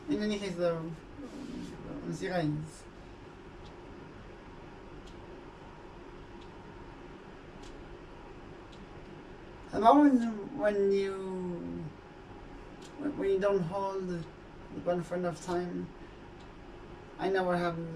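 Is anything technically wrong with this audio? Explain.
No, nothing technically wrong can be heard in this audio. Nothing in it points to a problem with how it was captured or delivered.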